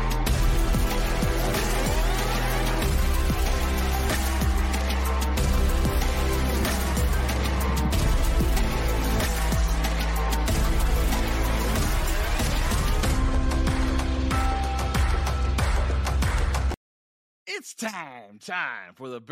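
No technical faults are audible.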